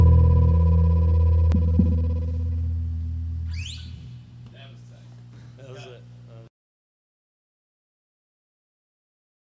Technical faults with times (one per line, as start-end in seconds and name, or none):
0.00-1.52 doubled audio track